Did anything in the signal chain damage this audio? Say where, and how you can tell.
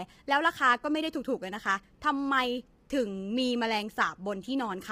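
Yes. Throughout the clip the speech sounds rough and grainy, with noise filling the gaps between harmonics and a thin, synthetic top end. This is likely low-delay AAC compression at the codec stage: AAC-ELD's short frames smear pitch detail, and the heavy damage fits roughly 24 kbps.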